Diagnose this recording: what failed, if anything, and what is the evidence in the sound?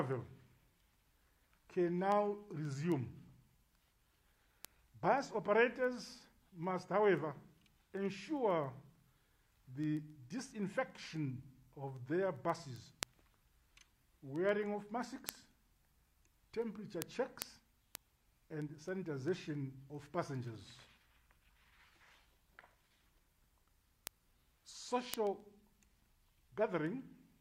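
Word clock ticks at the converter's digital input: sharp ticks every 0.15 s or so, 0.13 to 27.4 s, as the receiver's unlocked clock, roughly 150 ppm off, slips one sample. On a spectrogram they show as evenly spaced thin vertical broadband lines.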